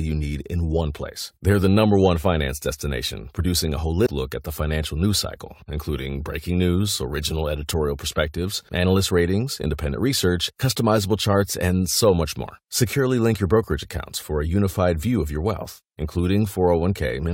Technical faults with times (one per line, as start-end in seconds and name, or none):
4.05 damaged data in a compressed stream